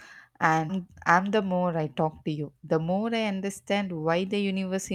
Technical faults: skip ahead; jitter buffer speed-up

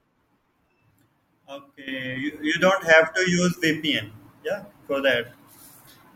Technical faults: sudden gain jump

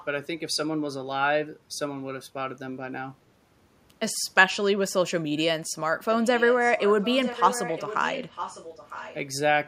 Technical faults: echo leak

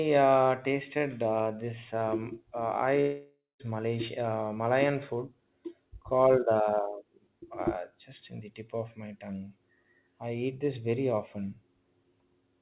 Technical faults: long network dropout

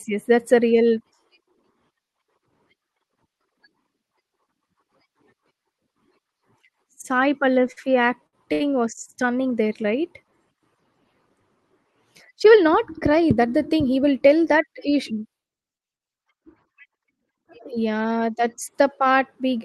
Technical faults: short stall from a late packet; jitter buffer speed-up

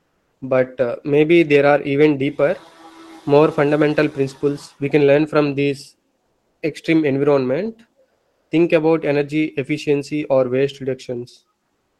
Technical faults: comfort noise in place of the background

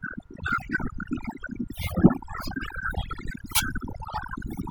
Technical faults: overdone noise removal

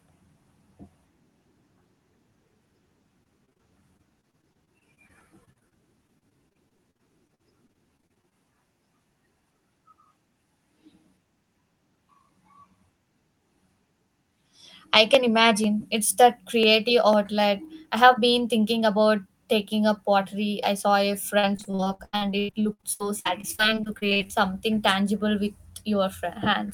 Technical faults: repeated packet loss (robotic sound); periodic USB or driver dropouts

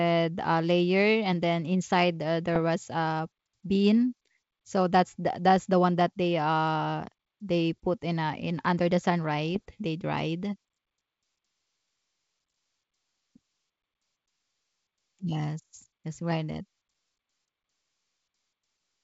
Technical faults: bit errors on an ADPCM link

